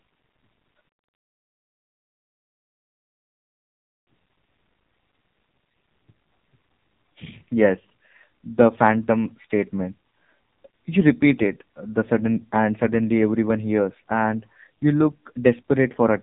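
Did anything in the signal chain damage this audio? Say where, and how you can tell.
Yes, the codec stage: an AMR narrowband mobile codec throughout. The spectrogram is empty above 3.8 kHz, and the heavily buzzy, synthetic pulse-modelled speech points to a very low bitrate near 6 kbps.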